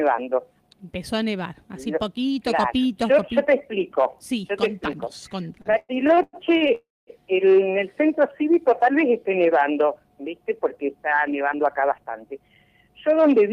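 From 5.47 to 6.72 s the audio stutters: repeated stalls, ten in all, where packets arrived late or slower than playback and the jitter buffer kept running dry. At each stall the receiver extended the last sound until data resumed, the longest hold lasting 103 ms. About 374 ms was filled this way, roughly 30% of that span, with nothing lost. The result is audio that drags and hitches.

Right after, from 6.75 to 7.10 s, comes a call audio freeze. The sound halts, is held and carried on for 322 ms, with 220 ms of that heard as silence, then continues from where it stopped with nothing missing. The likely cause is packets held up in transit that emptied the jitter buffer. The receiver bridged the wait, adding 322 ms of delay to everything after it.

Between 8.20 and 9.43 s there is a jitter buffer slow-down. With its reserve low, the receiver repeated short pitch periods or pause fragments many times in succession, inserting 61 ms in total. 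Playback runs at about 95% speed while pitch stays unchanged, so sounds in this stretch come across drawn out rather than lowered.

From 11.40 to 13.17 s a jitter buffer speed-up does the reverse. The buffer had more audio queued than its target, so the receiver cut short pieces of one or a few pitch periods repeatedly, removing about 150 ms. Playback runs at 108% speed with pitch preserved, and the passage sounds hurried.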